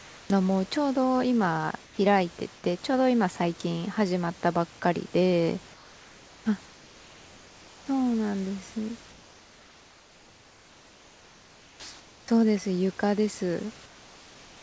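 At 0.0–0.3, 1.84–1.98, 2.56–2.64, 5.74–6.46, 6.66–7.88, 9.10–12.28 and 13.86–14.63 s, discontinuous transmission likely stopped the sender, so comfort noise replaces the room background with steady, featureless hiss about 2 to 5 dB quieter. At 12.25–12.28 s, the onset is clipped by the voice detector: a slow voice detector likely dropped the first 30 ms, so the sound starts abruptly, without its soft beginning.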